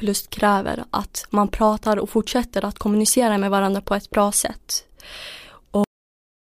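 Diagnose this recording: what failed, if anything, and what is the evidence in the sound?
Cut-off end at 5.84 s. The speech stops abruptly mid-sound and falls straight to digital silence, with no decay or natural tail, for the remainder of the recording. This points to the driver or buffer stage, or the final write to storage: the last buffers of audio were never flushed to the file, so the capture ended before the utterance did, and what should have followed 5.84 s was simply never recorded.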